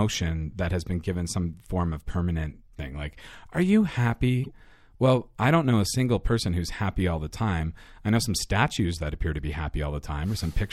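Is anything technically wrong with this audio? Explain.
Yes. From 4.44 to 4.51 s, between "thing like are you" and "well I don't know", a corrupt frame was decoded: damaged bits in a few compressed frames misplaced energy, producing a brief chirpy burst peaking near -25 dBFS.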